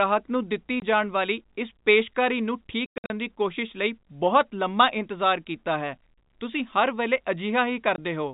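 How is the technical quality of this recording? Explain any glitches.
The recording has dropouts from packet loss filled with silence. Short holes appear at 0.80–0.82 s and 7.96–7.98 s, and a choppier stretch runs from 2.86 to 3.1 s, where about 200 ms goes missing in bits, the longest gap being 100 ms. The receiver played silence where audio never arrived, so each gap cuts in and out with a hard edge. Hole sizes fit 20 ms packets. The telephone-band G.711 sound, with nothing above 4 kHz, comes through as normal.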